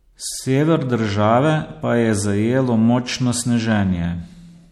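From start to finish the speech has a plainly audible watery, swirly texture, and nothing comes through above 14.3 kHz. That's the signature of MP3 compression, likely at a low bitrate, as the damage fits roughly 64 kbps. Short of bits, the encoder chops the treble at a fixed point and drops weaker frequency lines, which then flicker in and out frame by frame. That gives the burbling quality, with metallic chirps on the s sounds.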